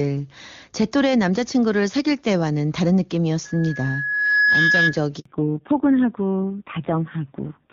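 From 3.45 to 4.98 s, a microphone picks up the loudspeaker it feeds, and the loop's gain exceeds one at 1.7 kHz. This loudspeaker feedback squeal swells over about a second into a steady tone roughly 5 dB above the speech. At 5.20 s a handover gap occurs: no speech frames arrive while the call switches networks, so the speech fades and drops out for 60 ms. When it returns at 5.26 s, the call has fallen back to narrowband, which points to a step down from HD Voice near 23.85 kbit/s to an older codec near 5.9 kbit/s. From there to the end, nothing above 4 kHz passes, and the speech sounds duller and rougher than the clearer wideband sound before the switch.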